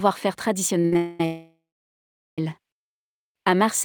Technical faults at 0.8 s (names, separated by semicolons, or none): short stall from a late packet